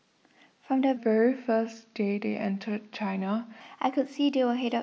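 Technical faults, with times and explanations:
0.97 to 3.60 s, section at the wrong speed: this stretch of speech plays at about 0.876 times its proper rate, so it drags and sits roughly two semitones lower, deepening the voice, before snapping back at 3.60 s. The likely cause is playback against a mismatched clock. On a spectrogram the harmonics and formants shift down and spread out in time across the section, while the waveform shows stretched syllables and wider cycle spacing.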